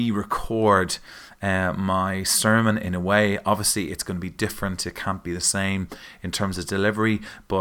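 Right near the start, at about 0.44 s, there's a phantom power thump: a supply switched on or off on the live input, and that voltage step went through the coupling capacitors. It's a short, deep bump peaking at about −25 dBFS, dying away in roughly 16 ms and gone by 0.52 s.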